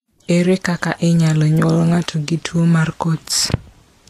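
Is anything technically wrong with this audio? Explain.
Yes. Vorbis compression, across the whole clip: nothing is present above 14.2 kHz, and the remaining treble is hissy and grainy, with the speech's consonant attacks smeared. This is likely low-rate Vorbis coding, which draws a smooth spectral floor and quantises the residue above it so coarsely that high-frequency detail turns into noise of similar energy. The level of damage fits a bitrate in the region of 37 kbps.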